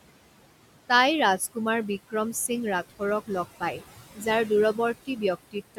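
Throughout, the background noise drops away between phrases and swells back under speech: noise suppressor artifacts, cutting the room noise by about 17 dB frame by frame.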